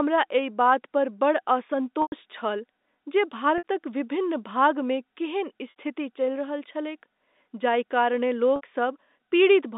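Packet loss with pitch repetition breaks up this telephone-band speech at 2.02 to 2.12 s, 3.58 to 3.64 s, 5.70 to 5.74 s and 8.56 to 8.61 s. The receiver fills each gap by looping the last pitch period, so the sound briefly holds with a buzzy sustain before speech resumes. The first gap is 100 ms, which fits about five 20 ms packets. The other three are 60 ms each.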